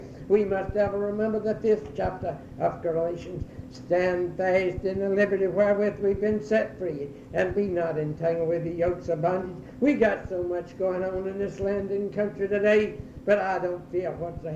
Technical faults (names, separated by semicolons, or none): none